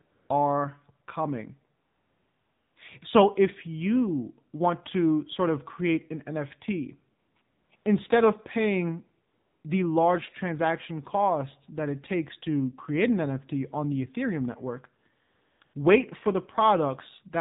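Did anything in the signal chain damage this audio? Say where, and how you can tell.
Yes. The codec stage left the clearest damage. The speech has passed through the AMR narrowband mobile codec, and its coding damage is plainly audible throughout. Nothing above 4 kHz survives, and the voice has a buzzy, synthetic edge that fits the low 7.4 kbps mode. On a spectrogram, energy stops flat at 4 kHz across the whole clip. Below that, harmonics look smeared and blocky in 20 ms steps, because each frame rebuilds the voice from a vocal-tract model and a few excitation pulses rather than from the waveform itself.

AMR comfort noise comes from the same mobile call path, through discontinuous transmission. The sender judged the talker silent and stopped sending speech frames, and the receiver filled each gap with synthetic noise. This happens at 0.02–0.30 s (just before "are coming"), 1.80–2.76 s, 7.20–7.36 s, 7.42–7.70 s, 7.76–7.86 s (just before "instead of paying"), 9.28–9.64 s, 15.22–15.60 s and 15.64–15.74 s. 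Each gap is a steady, smooth hiss that switches in and out abruptly. On a spectrogram these show as flat, featureless bands with hard edges. The waveform shows even low-level fill where real background would fluctuate.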